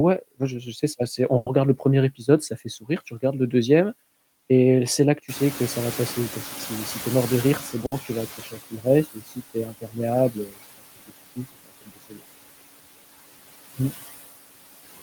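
Throughout the recording the background hiss drops away between phrases and swells back under them. These are noise suppressor artifacts: the suppressor judges each frequency band frame by frame and turns down whatever it takes for steady noise, here by about 17 dB, so the leftover noise flickers with the speech instead of sitting still.

At 1.37 to 1.48 s, between "sais c'est assez on" and "regarde le", a sound is held unnaturally long before the speech resumes. This is a short stall from a late packet. A packet arrived late, the jitter buffer ran dry, and the receiver stretched the last sound for about 90 ms until it came in, then carried on from the same point. Nothing is lost, but the delay grows by 90 ms. The same thing happens again at 7.86 to 7.94 s, this time a 60 ms hold.

From 5.28 to 8.57 s the background becomes suddenly louder and comes through clearly at first, then sinks over roughly three seconds. 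The room noise itself jumps by about 17 dB near 5.5 s, and afterwards sits about 15 dB below the speech. This is the noise suppressor catching up: its noise estimate lagged behind the jump and needed about 3.3 s to adapt before it reached its reduction of about 14 dB.

Within that stretch, from 7.16 to 7.85 s, the speech sounds slightly hurried while its pitch stays unchanged. This is a jitter buffer speed-up. The buffer held more audio than its target, so the receiver cut out short slices of a pitch period or so again and again. That trimmed about 50 ms and ran the speech at 106 percent speed.

Near the end of that adaptation and afterwards, parts of the speech turn faint or swallowed. This happens at 8.37 to 8.86 s (down about 13 dB), 9.04 to 9.37 s (about 17 dB), 9.54 to 9.97 s (about 11 dB), 10.31 to 10.58 s just before "je pense que c'est" (about 15 dB), and 11.35 to 12.23 s just after "je pense que c'est" (about 18 dB). 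This is speech cut by the noise suppressor, which mistook parts of the speech for noise and turned them down along with the background, a few hundred milliseconds at a time.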